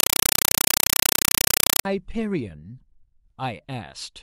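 A Dolby Digital (AC-3) bitstream is being passed to the output as though it were ordinary samples instead of being decoded, a compressed stream played as audio. From 0.0 to 1.85 s this speech clip is replaced by very loud chattering static: 5.33 ms noise bursts repeating 31.25 times a second, each followed by silent padding, which fits a 256 kbps stream.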